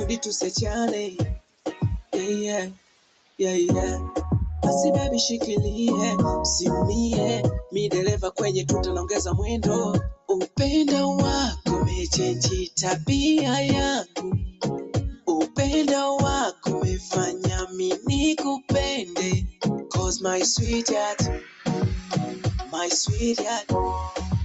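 A noise suppressor made for speech stays on throughout. It mistakes steady sound and decays for noise, so the level pumps by around 10 dB.

The noise suppressor cuts the sound harder at 1.39–1.66 s, 2.73–3.39 s, 10.15–10.3 s, 14.04–14.19 s, 15.13–15.28 s and 21.39–21.63 s. These drops reach about 16–18 dB, except the last, at about 8 dB. Sustained parts sink there.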